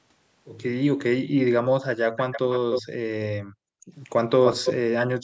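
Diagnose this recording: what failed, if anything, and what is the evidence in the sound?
Echo leak, call processing: at 2.32 to 2.82 s and 4.44 to 4.74 s, speech repeats 296 ms late, nearly as loud as the original. This is likely an echo canceller passing loudspeaker pickup, and it is a discrete delayed copy, not diffuse reverberation.

Background gated by the echo canceller, call processing: from 3.41 to 3.91 s the room sound dips by about 40 dB, then returns. The microphone was ducked rather than the stream lost, so it is not a network dropout.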